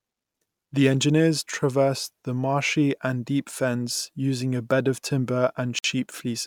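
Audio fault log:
5.79–5.84 s, Bluetooth stall: the speech cuts to dead silence for 54 ms near the end, then carries on. That's likely the headphones' buffer running dry while packets held up by interference waited to be resent, so playback just paused.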